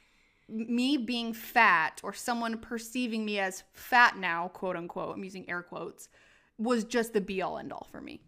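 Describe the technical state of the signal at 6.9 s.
At 6.9 s the signal is intact, with no audible dropout, clipping, distortion or other technical fault at that moment.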